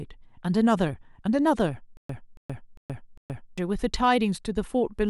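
From 1.97 s to 3.58 s the speech catches on a fragment of about 280 ms, replaying it four times with roughly 120 ms of dead silence between, a steady 0.4 s cycle. This is stutter with silent gaps, likely from a stalled stream re-sending its last buffer, and the intervening audio is lost.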